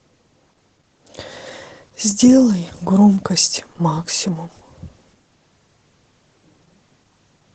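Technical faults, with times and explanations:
Throughout, Opus voice compression. Speech stops near 8 kHz and sounds muffled and hoarse from coarse excitation coding, which fits about 12 kbps.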